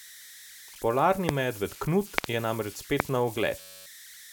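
Throughout the clip, converter idle tones sit about 20 dB below the speech: an undithered delta-sigma converter settles into repeating bit patterns on low-level input, leaving a whistle near 2 kHz in the pauses and a grainy texture under quieter passages.

A loud pop lands at 1.29 s, peaking about 20 dB above the speech. A closely spaced pair follows from 2.18 to 2.26 s, just before "je namreč", and another single pop comes at 3.00 s, right after "je namreč". The later pops peak about 25 dB above the speech. Each is a sharp transient over continuing sound, likely from a voltage step such as a plug, switch or static discharge.

From 3.61 to 3.86 s a system hang loop takes over. The sound hardware kept replaying one 10.67 ms slice of its ring buffer, which fits a 512-sample buffer, 24 times. This produces a steady 93.8 Hz buzz and drops roughly 300 ms of audio.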